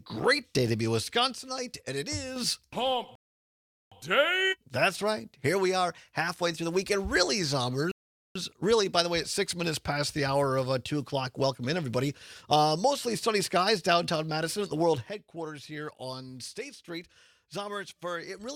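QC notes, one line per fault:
1.37–2.36 s, sudden gain jump: a gain change likely applied without a ramp drops sound and background together by about 6 dB in one step, then back.
3.15–3.92 s and 7.92–8.36 s, rebuffering stall: the player ran short of buffered data, cutting to silence for 0.76 s and 0.44 s before resuming exactly where it stopped.
15.09 s to end, sudden gain jump: an unramped gain step, likely a setting change, abruptly lowers everything by about 10 dB and it stays down.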